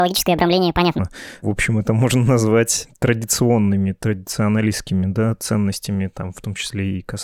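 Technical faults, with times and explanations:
0.00 to 0.99 s, section at the wrong speed: the opening of the speech runs at about 1.58 times its proper rate, so it comes out rushed and chipmunk-high, up by around seven semitones, before dropping back to normal pitch and pace. Speed and pitch shift together because the samples are simply being read out faster. The likely cause is that this first stretch was played or stitched in against the wrong clock.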